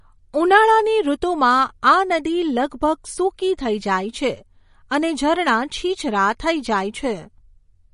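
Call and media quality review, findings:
Likely MP3 compression throughout: speech sounds watery and swirly, nothing above about 10.5 kHz, suggesting a starved bitrate near 40 kbps zeroing weak bands frame to frame.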